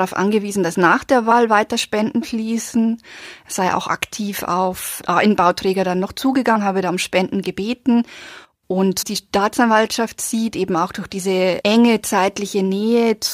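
Brief glitches at 1.30 s after "angewiesen dass nach der", at 3.88 s before "aktiv auf ah", from 6.55 to 6.57 s between "dann noch" and "habe da um", and from 9.01 to 9.03 s come from damaged data in the compressed stream. The decoder misreads corrupted frames and loses sync.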